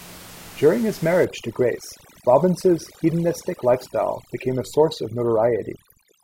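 From 1.25 s to the end, overdone noise removal strips frequency bands lying near the room noise, about 20 dB below speech, leaving the background lowered and broken into twinkling specks.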